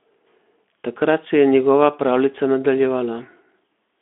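No technical faults can be heard anywhere in this recording.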